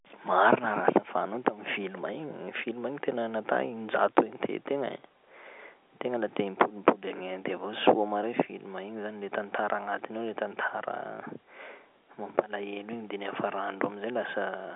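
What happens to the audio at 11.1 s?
Nothing goes wrong at 11.1 s: the speech carries on intact through that moment, with only the usual narrow telephone band of G.711 coding, nothing above about 3.6 kHz.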